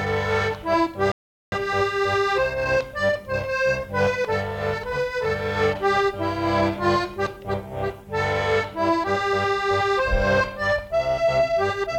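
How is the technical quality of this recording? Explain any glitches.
There is one glitch, a rebuffering stall from 1.12 s to 1.52 s. The playback ran short of downloaded data and halted for about 0.4 s while it waited for more to arrive, so the sound cuts abruptly to silence and then picks up exactly where it broke off. That is what sets it apart from a dropout: no audio is missing across the gap. The stall only inserts extra time, delaying everything after it by roughly 404 ms.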